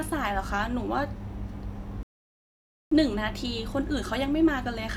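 At 2.03 s the speech drops into silence until 2.92 s, a rebuffering stall: the player exhausted its downloaded audio and paused for more data. Playback then resumes exactly where it stopped, so no speech is lost, but about 0.88 s of dead air is inserted.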